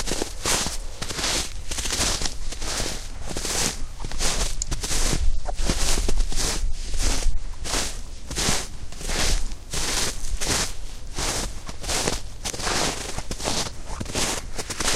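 Nothing in these everyday sounds gives any sign of a technical fault, so there's nothing here to point out.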